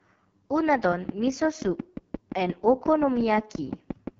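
AMR wideband (HD Voice) codec damage runs through the whole speech clip: the voice sounds rough and raspy, typical of AMR-WB's pulse-driven vocal tract model at the lowest rates, which fits the 6.6 kbit/s mode. Nothing is heard above 7.3 kHz.

A train of clicks begins at 0.92 s and continues to 4.08 s: about twenty sharp ticks at a steady 5.7 per second, peaking around 10 dB above the speech and audible in pauses too. Interference from nearby equipment or a faulty connection or power supply is the likely cause.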